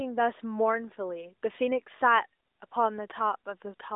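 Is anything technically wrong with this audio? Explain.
No, nothing is technically wrong: the speech comes through the AMR narrowband mobile codec as that path is meant to work, with the expected telephone band of roughly 300 Hz to 3.7 kHz, nothing above about 3.8 kHz, and only the light coding texture that fits its highest 12.2 kbps mode.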